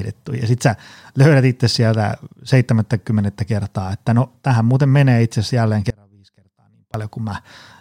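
At 5.90 s the speech cuts out abruptly and stays lost until 6.94 s, about 1.04 s, an audio dropout to a faint residue. The likely cause is the wanted signal being lost briefly while the path after the break stayed live, so the gap is not silent: a faint leak of sound, roughly 30 dB below normal level, carries on underneath. The hard edges at both ends set it apart from a natural pause or a fade.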